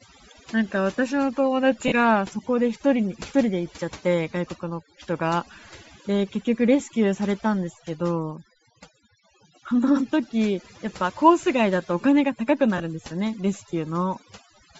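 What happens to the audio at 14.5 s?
At 14.5 s the background drops and breaks up into twinkling specks. This is overdone noise removal, present throughout the clip: an over-strong noise reducer shuts off individual frequency bands near its noise estimate, taking quieter parts of the speech with them.

Over the same moment, and across the whole recording, the speech also carries a breathy, grainy edge, with its upper range sounding filled in by noise rather than real detail. The likely cause is Bluetooth LC3 compression, consistent with a low bitrate of around 32 kbps in 10 ms frames, where much of the top band is discarded and replaced with noise.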